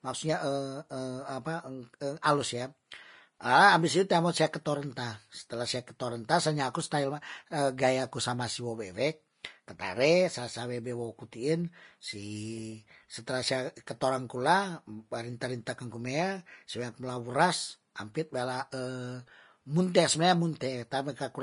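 Speech clip, and the whole thing sounds hissy and grainy with nothing above 10.5 kHz, likely Vorbis compression at a low bitrate, roughly in the 30 kbps range.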